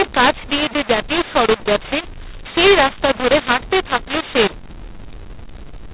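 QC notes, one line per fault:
Throughout: mu-law and A-law mixed up. The speech was encoded with G.711 mu-law but decoded as A-law, so each 8-bit code is mapped through the wrong logarithmic curve. Levels come out scrambled, with some samples too loud and others too soft, which makes the speech harsh and gritty across the whole clip. The quietest codes land well above zero, so pauses fill with noise. The 8 kHz telephone sampling rate still limits everything to below 4 kHz.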